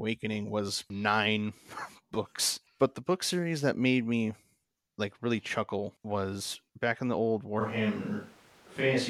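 From 7.62 s, right after "back in the old", the speech suddenly turns roomy and hollow with less bass, at about the same level, over room noise roughly 30 dB below it, until the end. This is likely a switch to a distant microphone after the close one dropped out.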